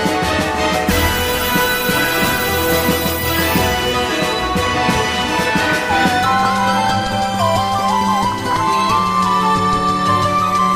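The whole clip sounds dull and granular. Upper bands flicker in and out, and a gurgle sits under the sound. This is most likely MP2 compression, with too few bits spread across its sub-bands. The damage is plainly audible and fits a rate near 80 kbps.

DAB burbling breaks through three times: 2.81 to 2.98 s, 6.43 to 6.45 s, and 8.13 to 8.56 s. Bit errors slip past the error correction and corrupt the coded frames. The result is short blips of noise, longest in the last burst.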